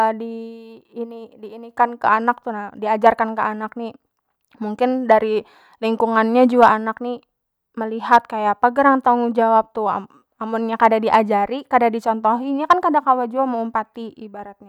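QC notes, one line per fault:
3.07, 5.12, 6.63–6.68, 8.13–8.17, 10.83–11.15 and 12.71–12.73 s, hard clipping: speech peaks push about 2 to 4 dB past what the chain can pass, so their tops get sliced flat. That adds high harmonics, heard as brief crackle, with a longer stretch of crackle around 11 s.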